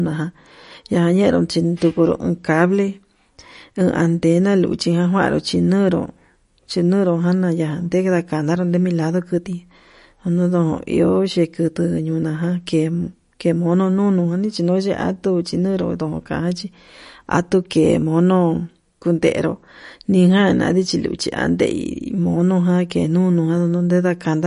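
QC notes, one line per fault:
Throughout, MP3 compression: nothing above 10.6 kHz, with plainly audible watery, swirly smearing, likely a starved encoder dropping weak lines, which fits about 40 kbps.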